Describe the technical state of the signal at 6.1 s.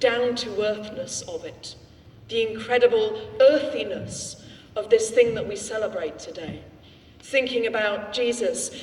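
The signal at 6.1 s is intact, with no fault audible at that moment.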